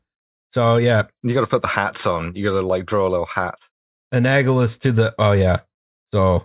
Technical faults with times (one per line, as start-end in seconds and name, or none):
none